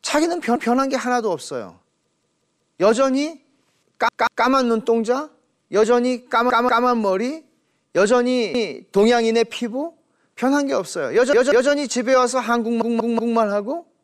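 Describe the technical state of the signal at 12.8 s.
A repeated buffer runs from 12.82 to 13.38 s: one roughly 186 ms piece of speech plays four times, stuttering, with hard joins visible as identical repeated waveform blocks.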